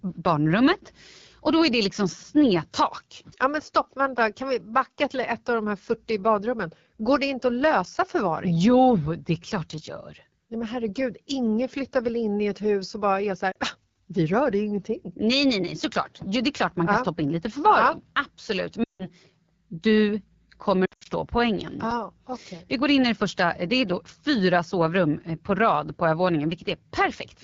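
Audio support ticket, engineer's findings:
AMR wideband (HD Voice) codec running at a low mode throughout. The rough, raspy speech fits one of the two lowest AMR-WB rates, near 8.85 kbit/s.

Lost AMR speech frames from radio-side checksum failures. The decoder concealed them by repeating the last parameters with falling gain. Brief dropout at 13.51–13.57 s (about 40 ms). Quick drop to near silence at 18.84–19.09 s. Scattered dropouts at 20.85–21.08 s, longest about 80 ms.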